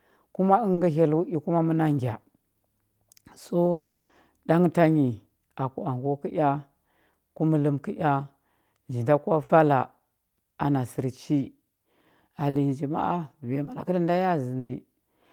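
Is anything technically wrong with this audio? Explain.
Yes, the speech has gaps where audio failed to arrive and was patched over.

Short concealed packet loss occurs at 0.73 to 0.79 s, 12.49 to 12.55 s and 13.65 to 13.69 s. About 40, 40 and 20 ms went missing, and the decoder extended the preceding sound to cover each gap. The result is a brief smear or wobble. On a spectrogram, a thin band shows repeated, slightly blurred harmonics.

From 3.71 to 4.11 s, roughly 380 ms is replaced by a continuation of the last sound that buzzes or hisses and fades without ever dropping to silence. The speech then resumes with that stretch absent. The likely cause is a long network dropout. A spectrogram shows a smeared, decaying block where speech detail should be.

A burst of packet loss occurs at 9.43 to 9.51 s (about 60 ms) and at 14.59 to 14.71 s (about 100 ms). Consecutive lost packets were filled by holding the previous sound while turning it down, which gives a held buzz or fading hiss. 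The waveform shows a tapering envelope, and the spectrogram shows frozen harmonics.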